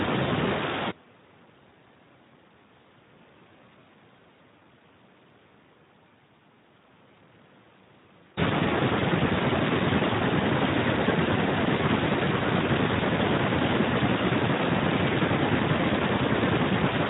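From start to finish the speech carries Speex codec damage. The CELP coder has too few bits to model the excitation, so the speech sounds noisy and hoarse, which fits a bitrate near 11 kbps. Unlike MP3-style swirling or muffled treble, this roughness sits inside the voice itself.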